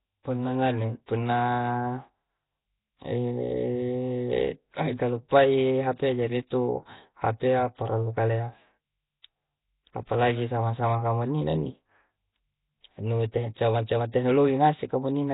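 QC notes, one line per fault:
Throughout: heavy damage consistent with Nellymoser compression. The speech carries a rough, hissy halo and a smeared, underwater quality, and nothing is present above 3.8 kHz. This is likely the Flash-era Nellymoser Asao codec at a setting that fits a 16 kbps stream. It codes each 256-sample block with a fixed two bits per sample. Bands too weak to earn bits are replaced with noise, which causes the hiss, and the coarse block coding smears the speech.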